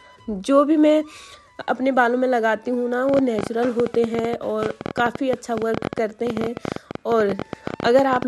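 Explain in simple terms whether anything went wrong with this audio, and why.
A train of clicks runs from 3.09 s to 8.23 s: about seventy uneven pops, roughly 13 a second, most likely from electrical interference or a faulty connection.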